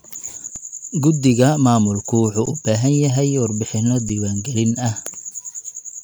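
Underrun with held sample hits this speech clip at 0.56, 2.46 and 4.09 s (between "yahay warbixinno" and "gelin ah"). Each time the output buffer ran dry and froze the waveform flat for about 2 to 12 ms, with the longest fitting a 512-sample buffer. Each time about 2 to 10 ms of live audio were lost.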